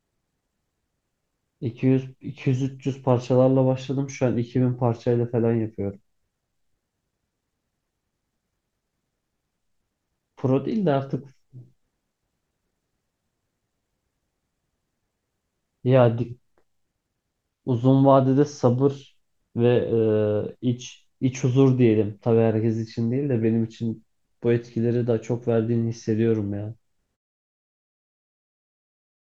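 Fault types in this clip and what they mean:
No faults can be heard in this speech recording.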